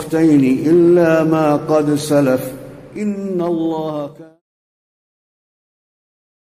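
One channel drops out from 2.96 s to 5.36 s: the level falls abruptly by about 6 dB, likely because one side of a stereo feed went silent and the mono sum lost its share, while the smooth fade-out from around 3.5 s to 4.42 s continues beneath it.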